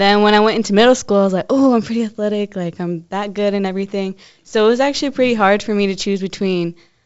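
No faults are audible in this speech: the G.722 wideband telephone coding is working as intended, with the band stopping at 7.7 kHz and only faint, if any, coding damage, which fits the full 64 kbit/s mode.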